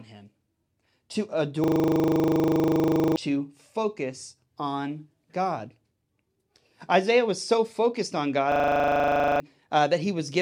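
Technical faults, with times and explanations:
1.64–3.16 s, system hang loop: a 40 ms slice repeats as a rough 25 Hz buzz until "to focus on" resumes, as the sound hardware keeps replaying one buffer while the driver is stalled; about 1.5 s of audio is lost.
8.52–9.40 s, system hang loop: after "was so focused on", a 40 ms buffer cycles at 25 Hz while the system freezes, losing about a second of audio.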